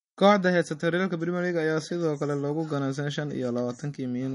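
Throughout, likely MP3 compression starved of bits, consistent with about 40 kbps, removes everything above 10.6 kHz and drops weak components, leaving the speech dull and plainly watery.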